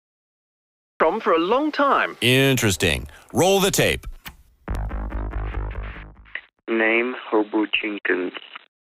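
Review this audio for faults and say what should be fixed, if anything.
Cut-off start: the first 1.00 s is digital silence, and at 1.00 s the audio enters abruptly in the middle of a sound, with no natural attack or fade-in. Capture began after the sound was already underway, so its opening portion is missing. To prevent this, arm and start recording before the source begins, or use a pre-roll buffer.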